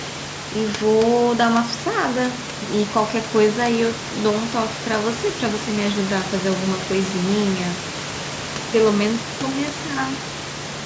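No technical faults can be heard in the speech: the call microphone processing has trimmed the lowest bass and leaves nothing above 8 kHz, and the room noise sits about 13 dB below the speech.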